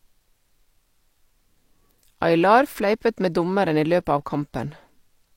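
From 2.41 s to 3.94 s the speech turns grainy, with a rough distortion that rises and falls with the signal. This is low bit depth without dither. The samples were likely truncated to about 10 bits, leaving error around 50 dB below the signal.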